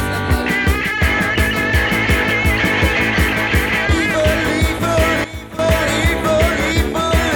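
At 5.24 s there's a sudden gain jump: the whole signal drops by about 13 dB in a single step and stays down until 5.59 s, where it comes back up just as abruptly. The background noise falls and rises right along with the sound, so it's a level change across the entire signal. The likely cause is a digital gain setting being applied instantly, with no ramp to ease the transition.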